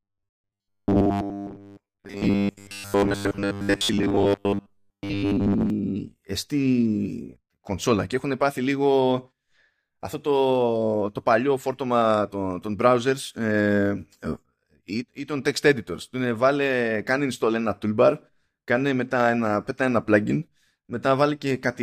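From 0.01 to 5.7 s, new audio most likely arrived too seldom, so the software filled each gap by replaying the same short stretch over and over while the real audio was skipped, roughly two-thirds of the time. That is robotic sound from repeated short buffers. The repeats impose a fixed 100 Hz buzz, which fits a repeated chunk of about 10 ms, and the speech turns into a rigid, metallic drone that only loosely follows the talker.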